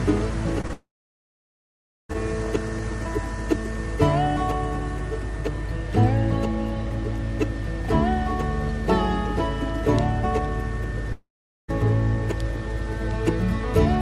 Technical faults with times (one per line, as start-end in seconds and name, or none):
0.61-0.71 short concealed packet loss
0.73-2.11 long network dropout
11.12-11.70 long network dropout